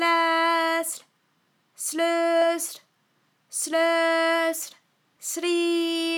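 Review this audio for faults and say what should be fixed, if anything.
At 2.42 s the sound skips forward, with roughly a third of a second gone and the two sides butted together without any gap. This is likely audio missing between chunks, lost while the processor closed one 3-second block and opened the next. Prevent it by double-buffering so capture continues across block handovers.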